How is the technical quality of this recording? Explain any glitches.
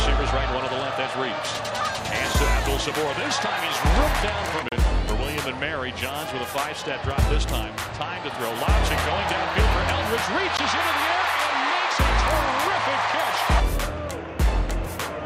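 Two brief dropouts interrupt the audio, at 4.69 s for about 33 ms and at 10.57 s. This is likely a Bluetooth stall: delayed packets let the headphone buffer run empty, so sound cuts to silence, then resumes.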